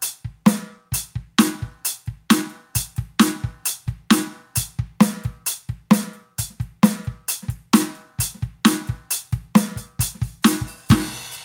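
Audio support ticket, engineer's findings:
Gain pumping throughout the music. Gain pulled down on each loud sound, around 5 dB swing. Likely an input gain set too high into a fast limiter or compressor. Level tracks the program itself, unlike steady fades or random dropouts.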